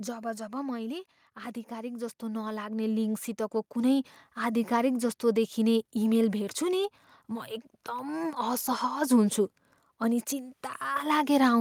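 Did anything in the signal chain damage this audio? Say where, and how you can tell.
Yes. Automatic gain falling in call processing: from 0.05 to 1.13 s the level sinks about 6 dB, with the background dropping too, which rules out a quieter talker.

Automatic gain rising, same stage: from 1.68 to 4.8 s the gain swells about 10 dB. Speech and background rise together, unlike a compressor, which responds to the talker's level.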